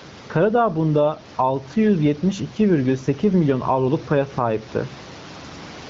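Gain pumping runs through the whole speech clip: the gain swings by around 10 dB, pulling down under every loud syllable. The likely cause is gain set far too high, with a fast limiter pulling the room noise down on each peak.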